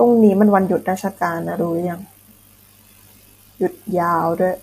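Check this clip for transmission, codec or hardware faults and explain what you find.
One fault runs through the whole clip: the speech sounds rough and grainy from start to finish, with a hiss-like fill between the voice's harmonics and a top band that seems thin and synthetic. This is likely low-delay AAC compression (AAC-ELD). Its short frames resolve pitch harmonics poorly and need more bits, so at a rate like this, which fits roughly 32 kbps, the codec smears noise into the gaps and rebuilds the highs coarsely. The damage is plainly audible.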